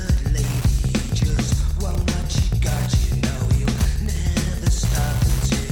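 Wi-Fi interference runs through the whole clip as a steady ticking about ten times a second, roughly 20 dB below the audio. A nearby Wi-Fi radio's beacon, repeating every 102.4 ms, is being picked up and rectified by the audio circuit, which turns each beacon into an audible tick.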